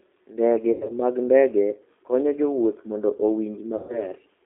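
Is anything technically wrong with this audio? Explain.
Yes. Throughout, the speech passes through a G.729 codec at 8 kbit/s. It rebuilds each 10 ms frame from a vocal-tract filter, a pitch predictor and a few pulses, so the voice sounds rough and synthetic. A spectrogram shows nothing above about 3.6 kHz and little below 150 Hz.

There is VoIP packet loss concealed by the speech codec at 0.72–0.91 s, just before "mag ndege konyo jowuoth", and at 3.77–4.06 s. About 80 ms and 120 ms of audio are missing, which fits several 20 ms packets each time. The decoder repeats its last pitch and filter at falling gain, stretching the sound into a buzzy tone or coloured noise that fades. On a spectrogram this appears as stretched, smeared energy, and on the waveform as a decaying envelope.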